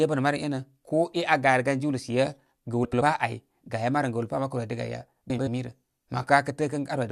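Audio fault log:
2.84–3.02 s and 5.30–5.48 s, frames out of order: two adjacent blocks of about 85 ms swap places in this speech, giving a garbled flutter.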